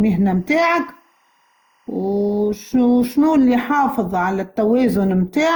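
A speech recording that sounds swirly, smeared and hollow throughout, with a watery quality and blurred consonant onsets, worse than its bandwidth would suggest, since content still reaches about 20.2 kHz. The likely cause is generation loss: the audio has been decoded and re-encoded many times, perhaps around seven passes of something like Opus at 64 kbit/s. Each pass quantises on a shifted frame grid, so noise and spectral gaps pile up. From 0.00 to 3.18 s a faint, steady chirping warble sits behind the speech, about 45 dB below it, flipping between pitches near 1 kHz and 2 kHz. This is timecode bleed: linear timecode leaking in from an adjacent track or cable, and its bit pattern fits a 23.976 frames-per-second rate.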